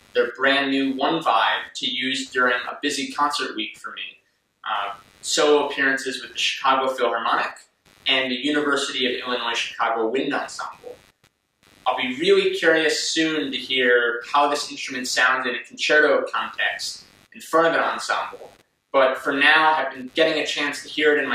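Computer activity noise runs through the whole recording: a faint buzzing, chirping texture pulsing at around a hundred times per second and sitting roughly 35 dB below the sound. It rises and falls with the computer's own workload, not with the audio. Shifting current draw from the processor, graphics card or mouse disturbs the ground the audio circuit shares with them, and those fluctuations leak into the signal as this scratchy, activity-driven interference.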